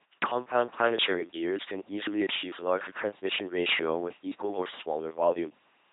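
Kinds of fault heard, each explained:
LPC-10 vocoder: The whole clip has the flat, buzzy robot quality of this old 2.4 kbit/s military codec, and the damage is heavy. Instead of carrying the real waveform, it keeps only a rough vocal-tract filter shape and excites it with either a pulse train or noise, switching each moment fully one way or the other. That's why the speech sounds mechanical and synthetic, with nothing at all above about 3.8 kHz.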